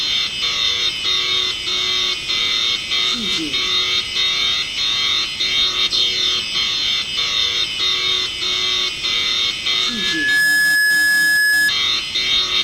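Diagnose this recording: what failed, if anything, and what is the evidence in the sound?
Loudspeaker feedback squeal from 9.86 s to 11.72 s. A single tone near 1.7 kHz swells out of the sound over roughly half a second and sits around 5 dB above the program until it cuts off. The failure is in the analogue acoustic path: a microphone is hearing the loudspeaker it drives, and at 1.7 kHz the gain around that loop exceeds unity, so the tone keeps reinforcing itself until the loop is broken.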